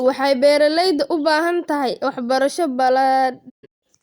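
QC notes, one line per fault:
3.48–3.84 s, digital broadcast dropout. The speech fades out over 20 ms and breaks into several silent holes across 320 ms, the longest 160 ms. The receiver muted while frames arrived corrupt or missing. What was sent then is gone.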